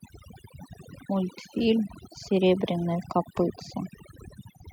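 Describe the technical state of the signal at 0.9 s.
At 0.9 s the background drops and breaks up into twinkling, warbling specks. This is overdone noise removal, present across the whole clip rather than at this moment alone. A noise reducer set far too aggressively is pushing individual frequency bands down or out whenever they sit close to its noise estimate. That strips the background and also takes the quieter parts of the voice.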